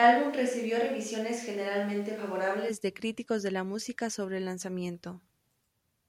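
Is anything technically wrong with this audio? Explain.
Yes. From the very start of the speech until 2.68 s, just before "de críticos de la", the sound has a switch to a distant microphone. It turns roomy and hollow, thin in the bass, with room noise roughly 30 dB below the speech, though the level barely changes. The likely cause is that the close microphone's signal was missing and a farther one was picking up the room. Unlike added reverb, the tone and room change abruptly together when the close pickup returns.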